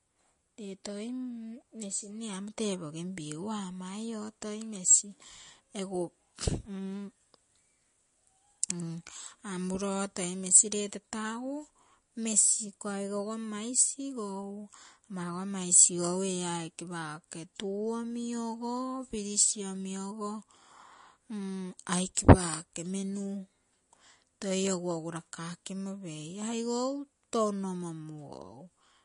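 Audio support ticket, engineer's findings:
Watery, swirly speech throughout, with chirpy sibilants and smeared consonant attacks; nothing above 10.6 kHz. Likely MP3 compression, starved for bits, so the encoder drops the top band and lets weak spectral lines flicker between frames. Damage points to roughly a 40 kbps stream.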